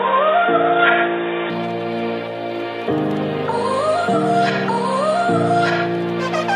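From 0 to 1.5 s the audio sounds dull and boxy, with nothing above 3.8 kHz and a faint extra noise floor well below the signal. It then opens to full bandwidth with no gap or level jump, likely an input switched to a poorer device.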